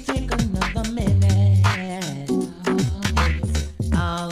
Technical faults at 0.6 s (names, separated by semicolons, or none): none